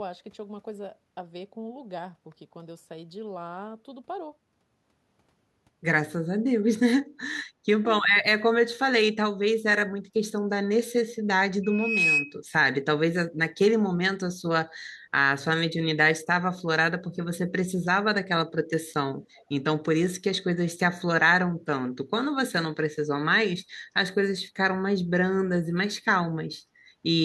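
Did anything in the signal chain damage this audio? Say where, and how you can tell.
Yes. Speech suppressed in double talk at 10.04 to 10.09 s, in call processing: the level dips by roughly 15 dB for about 50 ms, likely because the echo canceller mistook overlapping talk for loudspeaker echo and ducked the near-end voice along with it.

Loudspeaker feedback squeal from 11.63 to 12.37 s, an acoustic loop between loudspeaker and microphone: a 2.5 kHz tone swells over roughly 0.4 s to about 5 dB above the speech, as the loop gain at that frequency passes unity and the tone feeds on itself.

Echo leak at 19.37 to 19.45 s, in call processing: a faint delayed copy of the voice trails it by 336 ms, about 35 dB down, likely residual loudspeaker pickup that the far side's echo canceller failed to remove and sent back.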